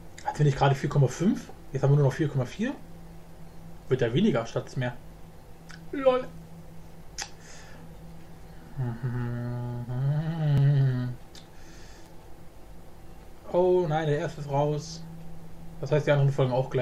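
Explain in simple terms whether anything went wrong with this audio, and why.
Something did slip at 10.58 s: the sound jumps forward a tiny bit, losing only a few milliseconds. That's likely a dropped buffer (overrun), where the program didn't grab a chunk of audio in time, so it was overwritten and the two sides got stitched together.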